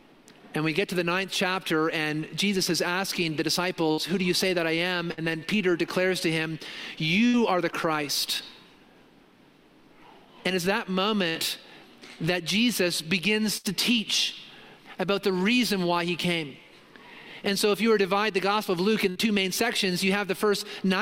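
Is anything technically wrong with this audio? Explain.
Yes. There are bursts of packet loss at 3.91, 5.12, 7.27, 11.29, 13.57 and 19.10 s. Each time about 60 ms of audio failed to arrive, and the receiver held the last sound for roughly 60 ms while fading it down. The audio then jumps ahead, with that stretch missing.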